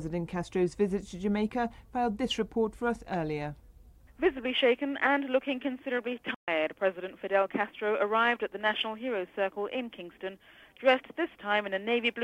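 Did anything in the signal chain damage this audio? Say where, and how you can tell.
Yes. There is a playback stall at the playback stage, from 6.34 s to 6.48 s. The sound stops in mid-flow and the output goes silent for about 130 ms. Then it picks up again. The likely cause is the player running short of data, or its output thread being blocked. Nothing reached the device until it recovered.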